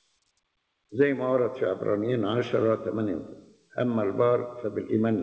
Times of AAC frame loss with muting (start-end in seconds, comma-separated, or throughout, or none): none